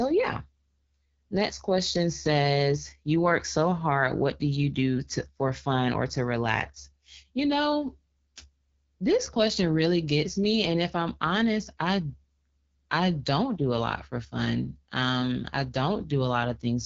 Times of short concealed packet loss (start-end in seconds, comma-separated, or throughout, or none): none